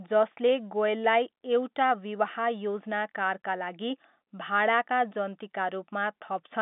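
Nothing in this speech recording stands out as a technical fault. It carries the narrow band of G.711 telephone coding, with the sound confined to roughly 200 Hz to 3.6 kHz and nothing audible above about 3.8 kHz.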